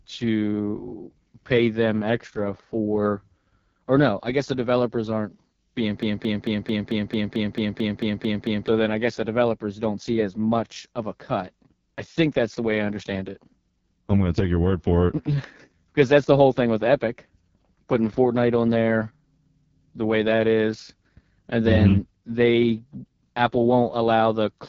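From the start and through the whole clip, the speech carries the sound of the AMR wideband (HD Voice) codec at heavy damage. The raspy, rough texture fits one of its lowest modes, consistent with 6.6 kbit/s, where too few bits describe the excitation pulses driving the vocal tract model. Nothing sits above 7.1 kHz, and the top band is filled with shaped noise instead of coded detail.

From 6.03 s to 8.68 s there is a broken-record loop: a fragment of about 0.22 s plays back to back twelve times, giving a stuttering, machine-gun repetition. The likely cause is a stall in the player, encoder or stream, with the last held buffer resent until data resumed. The audio that belonged in those 2.65 seconds never arrives, so the speech jumps ahead when the loop ends.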